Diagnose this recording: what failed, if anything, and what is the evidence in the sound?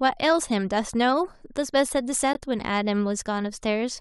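A gap between stream segments shows up at the playback stage: at about 2.33 s the speech drops into a hard-edged hole of roughly 17 ms. Two segments' timestamps don't quite meet, so the player pads the missing span with silence. Nothing's actually lost.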